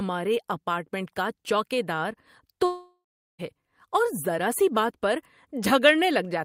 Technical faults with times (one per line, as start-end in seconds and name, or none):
2.65-3.41 long network dropout